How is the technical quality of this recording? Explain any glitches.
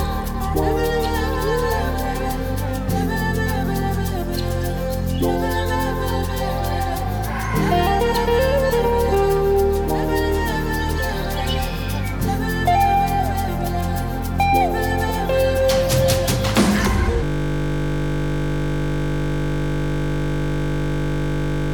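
A steady 50 Hz buzz takes over from 17.24 s to the end. This is a system hang loop: the system froze while the audio hardware kept replaying one 20 ms buffer over and over.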